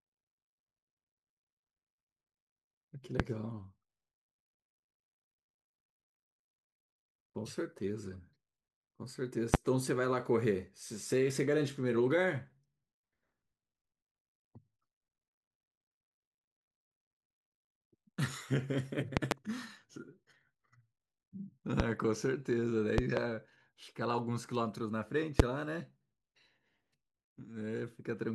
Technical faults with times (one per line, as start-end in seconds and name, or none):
3.20-3.22 loud pop
9.54-9.57 loud pop
19.17-19.34 loud pop
21.80-21.83 loud pop
22.98-23.20 loud pop
25.40-25.42 loud pop